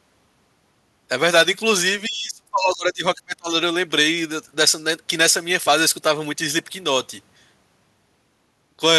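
From 2.07 to 3.5 s, the speech is pushed down hard, at its deepest by about 30 dB. It thins and breaks up. This is speech suppressed in double talk, likely an echo canceller muting the talker while both sides spoke.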